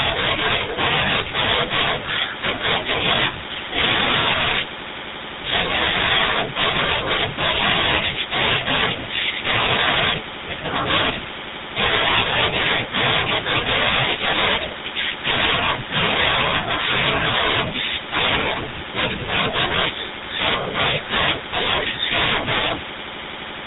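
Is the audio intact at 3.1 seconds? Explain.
No, not really. At 3.1 seconds, like everywhere else in this speech clip, you're hearing the GSM full-rate codec at work. It models the vocal tract and drives that model with a sparse, regularly spaced pulse excitation, which fits the old 13 kbps full-rate mode. The result is a plainly audible buzzy, gravelly roughness on the voice, and there's nothing above about 3.8 kHz, so it sounds dull and boxed-in.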